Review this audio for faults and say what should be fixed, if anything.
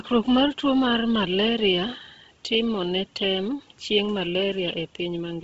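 Throughout, the speech sounds breathy and grainy, with its upper detail smeared into a hiss and nothing present above 7.7 kHz. This is likely heavy Bluetooth LC3 compression. Its 10 ms transform frames are starved at a rate that points to roughly 16 kbps, so the codec zeroes most of the high band and fills it with noise. To prevent it, record over a wired connection or raise the LE Audio bitrate and sample rate.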